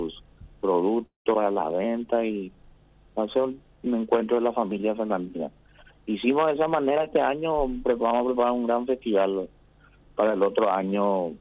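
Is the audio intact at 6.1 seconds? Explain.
Yes, the audio is intact at 6.1 seconds, with nothing there beyond the narrow telephone-style band of the call path, which carries nothing above 4 kHz.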